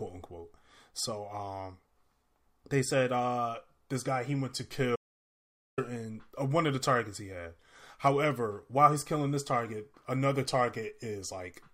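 At 4.96 s the input was likely lost while recording continued, an audio dropout to silence after "guy he went to": 0.82 s with no room tone.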